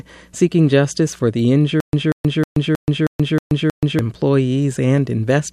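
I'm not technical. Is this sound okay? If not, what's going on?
No. Right after "seeking justice for the", from 1.80 to 3.99 s, a short scrap of speech repeats seven times with silent gaps between. This is stutter with silent gaps, likely from playback stalling, and the speech meant for that stretch is lost.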